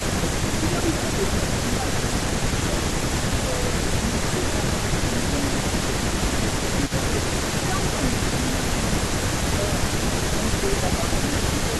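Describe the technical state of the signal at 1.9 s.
At 1.9 s the speech dips by up to about 10 dB between 0.01 and 2.84 s. This is likely speech suppressed in double talk, as an echo canceller ducks overlapping talk. The waveform shows notched envelope dips.

A faint copy of the speech trails it by 167 ms, about 10 dB down, from 0.88 s onward, likely an echo leak from incompletely cancelled loudspeaker pickup. The spectrogram shows shifted ghost harmonics.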